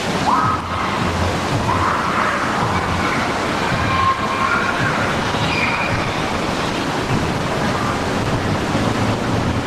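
From 5.95 s to 7.10 s the audio suffers repeated stalls (stutter). Packets arrived late or too slowly, so the jitter buffer kept running dry. Six brief hitches can be heard. At each one the receiver held the last sound over to bridge the wait. The longest lasts 40 ms. Together they add about 110 ms, roughly a tenth of that stretch. Nothing is lost. The sound simply drags and catches, with a halting, uneven pace.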